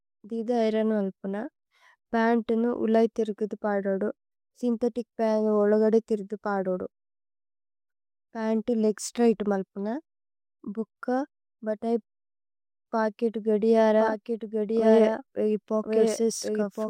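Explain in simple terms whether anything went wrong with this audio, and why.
From 14.0 s to the end, the speech is heard twice: a second, somewhat quieter copy trails about a second behind. This is a doubled audio track, likely from the same sound being captured again by a slower path. Unlike an echo, the copy doesn't fade or sound roomy. It switches in abruptly.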